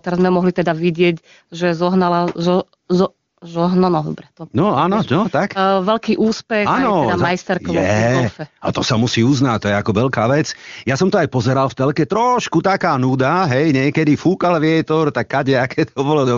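Right after "že zohnala zo zo", AMR comfort noise replaces speech frames at 3.31–3.37 s and again at 3.39–3.41 s: the background becomes a steady synthetic hiss. The faint codec colouring fits AMR-WB's top rate.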